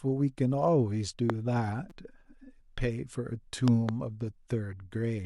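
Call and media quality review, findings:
Loud pop, 1.30–1.32 s and 3.68–3.91 s: a voltage step or pulse on the analogue path, likely a connector, switch or static discharge, shaped by downstream stages into a sharp pop (a double pop in the second event), about 15 dB above the speech, which continues underneath.

Repeated buffer, 1.90 s: playback underrun, so the device replayed its last buffer three extra times instead of waiting for new audio. Each repeat lasts 5.8 ms, consistent with a 256-sample buffer, producing a brief buzzy stutter with hard joins and around 20 ms of speech missing.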